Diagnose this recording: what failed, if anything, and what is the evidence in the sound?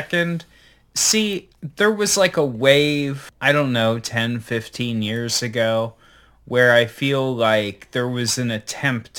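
Crude rate conversion at the sample-format conversion stage, present throughout the speech. A gritty, inharmonic fizz rides on the louder and brighter syllables, with the added error sitting only about 20 dB below the signal. It fits a 48 kHz to 44.1 kHz change made by simply picking the nearest sample, with no interpolation filter. That drops samples in a pattern fixed by the ratio of the two rates, and the resulting error folds into shifted, inharmonic copies of the speech.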